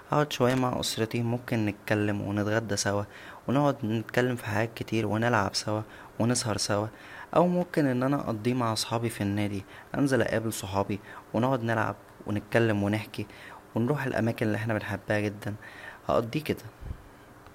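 A worn or dirty contact is making and breaking the signal path, a loose connector crackle, from 0.50 to 0.61 s and again from 7.60 to 7.72 s. Each time the speech is chopped into a brief, irregular burst of scratchy crackle.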